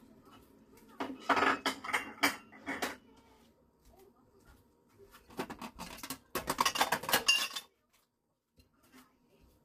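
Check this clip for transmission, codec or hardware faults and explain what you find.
One codec fault runs through the whole clip. It is likely low-delay AAC compression, AAC-ELD at a rate that fits about 32 kbps. Its short frames resolve detail poorly, leaving plainly audible grainy roughness, and nothing survives above 15.6 kHz.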